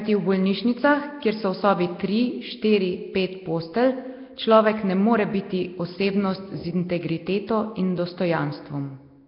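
Nellymoser compression, likely, runs through this speech clip from start to finish. Heavy damage leaves a rough, hissy halo and a smeared, underwater quality, and nothing is heard above 5.3 kHz. Fixed, sparse bit allocation starves weak bands and fills them with noise, consistent with a rate near 22 kbps.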